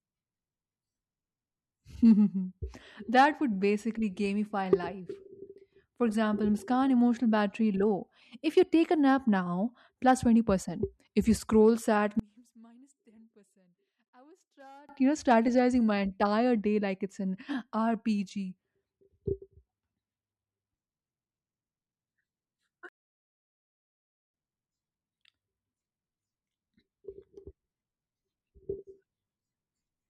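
From 12.20 to 14.89 s, after "you scroll sad", the speech falls about 32 dB to a faint residue in mono, likely one channel inverted so the matching sides cancel. The waveform shrinks to a sliver; the spectrogram thins.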